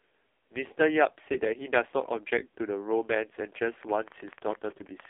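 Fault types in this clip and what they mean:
AMR narrowband mobile codec: Heavy codec damage leaves speech buzzy and synthetic, consistent with a very low AMR-NB rate near 5 kbps. A spectrogram shows a hard ceiling around 3.7 kHz, with energy confined to a telephone band of roughly 250 Hz to 3.5 kHz.
Train of clicks: From 3.83 s to 5.06 s, around twenty similar clicks tick through the sound at about 14 per second, unevenly spaced, likely from electrical interference or a struggling interface. The waveform shows sharp spikes roughly 5 dB above the signal; the spectrogram shows thin vertical broadband lines.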